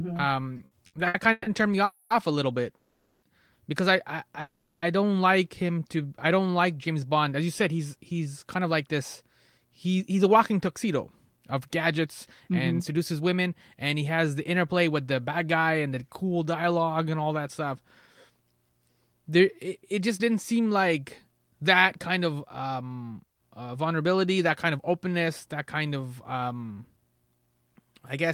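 Speech with repeated stalls (stutter) between 0.57 and 1.48 s: five short gaps, the longest 140 ms, were filled by stretching the preceding sound, so about 38% of that span is concealment, 350 ms in total. Nothing is lost, but the delivery drags and judders because packets arrived late and the jitter buffer repeatedly ran dry. Three call audio freezes follow, at 1.84–2.12 s, 2.76–3.24 s and 4.40–4.84 s. In each, the last sound is held as a fading buzz for 260, 460 and 420 ms, with brief silences of 10 and 50 ms in the later two, before speech resumes where it stopped. The likely cause is packets held up in transit, which emptied the buffer and pushed playback delay back by those amounts. Jitter buffer slow-down appears at 5.63–6.57 s and 16.62–17.86 s, where repeated pitch periods add 123 and 135 ms. Speech runs at 88% and 90% speed at unchanged pitch, sounding drawn out as the buffer rebuilt its reserve. 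Jitter buffer speed-up runs at 7.78–14.09 s and 19.65–28.27 s, at 107% and 108% speed with unchanged pitch. Roughly 0.4 s and 0.7 s are trimmed away, making speech sound hurried as the buffer shed excess delay.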